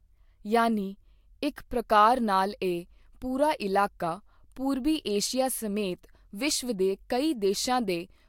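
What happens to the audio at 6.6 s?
Nothing goes wrong at 6.6 s; the speech there plays through intact, with no dropout, click or distortion.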